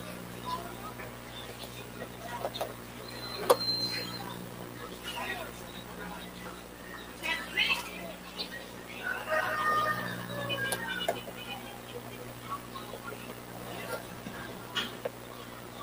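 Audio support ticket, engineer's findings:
Noise suppressor applied to music or sounds. Present throughout the clip. Level pumps and breathes on sustained material. Swing of around 5 dB. Held tones and decaying tails get pulled down, then recover. Component: a speech-tuned noise suppression stage left active in the chain. Mechanism: it treats steady tonal content, ambience and reverb as background noise. Gain drops whenever the signal holds still. Result is a thinned, fluttering texture. Fix: bypass suppression for non-speech sources.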